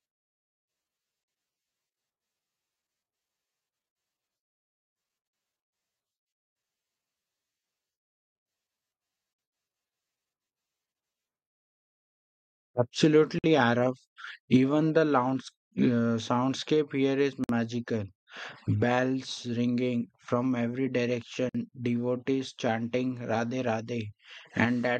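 Gaps at a join of encoded pieces, 43 ms and then 53 ms long, break the speech every 4 s at 1.24, 5.28, 9.33, 13.39, 17.44 and 21.49 s. Untrimmed encoder delay and frame padding leave brief silences, and the speech then resumes where it stopped.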